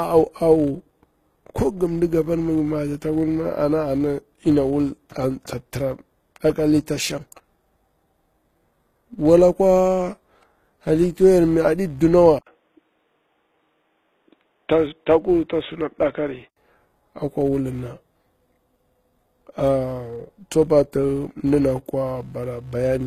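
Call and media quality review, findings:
Filter restarted on every block, whole clip: steady 200 Hz buzz tracking speech level, fitting 5 ms blocks. Filter state is discarded each block, so every block starts with a small transient.

HE-AAC compression, whole clip: plainly audible codec damage, nothing above 14.9 kHz. Treble is rebuilt by copying lower bands upward, and the sound suggests about 20 kbps. The likely cause is this codec.

Input switched to a poorer device, 12.39–16.57 s, right after "yori mi aɗi dunawa": 80 ms gap at the switch, then a narrower band and new background noise well below the speech, with level roughly unchanged. Likely a mid-call device or profile change.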